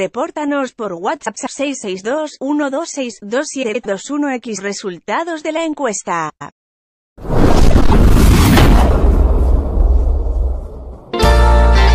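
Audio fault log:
1.25–1.48 s, 3.63–3.86 s, 6.29–6.51 s, 7.70–7.93 s, frames out of order: in each stretch, two neighbouring blocks of about 105 ms play in reversed order, which fits runs of four frames each being swapped before decoding. The sound briefly stutters into a garbled flutter. The timeline stays intact, so nothing is lost or delayed.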